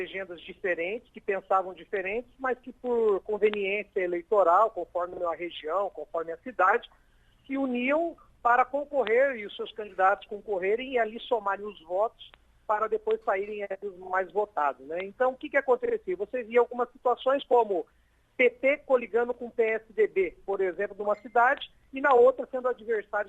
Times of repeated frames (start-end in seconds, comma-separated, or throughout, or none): 5.13-5.22, 14.03-14.12, 15.85-15.93, 22.17-22.21